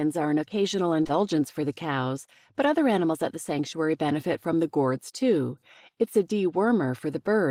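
Just after "are an occasional", from 1.03 to 1.11 s, two short concealed packet losses run back to back, each about 20 ms of missing audio. The receiver extended the preceding sound to bridge each gap, leaving a brief smeared wobble before "for the cows but", rather than the silent dropout or click of an unconcealed loss. After "from the gourds too", between 6.02 and 6.18 s, hard clipping flattens the peaks by only about 1 dB. It gives a light crackle confined to the loudest moments, not the constant fuzz of heavy overload or the gradual, rounded dulling that a limiter would leave.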